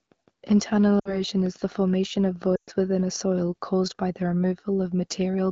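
Lost AMR speech frames occur twice: corrupted frames failed their checksum, and the decoder reused its last good pitch and vocal tract settings while lowering the gain. At 1.00 to 1.20 s about 60 ms is lost, consistent with three 20 ms frames, giving a brief drop toward near silence. At 2.55 to 2.70 s a longer 120 ms gap fades the sound quickly toward silence, as wideband concealment does, before the audio returns briefly weak or rough.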